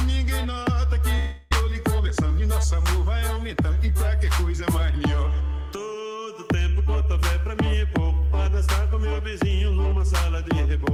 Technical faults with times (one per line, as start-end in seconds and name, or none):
1.18-1.53 long network dropout
1.60-2.47 jitter buffer speed-up